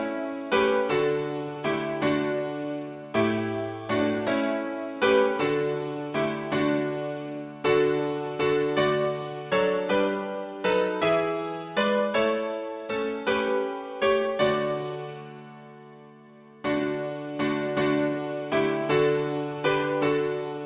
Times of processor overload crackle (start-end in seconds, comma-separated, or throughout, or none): none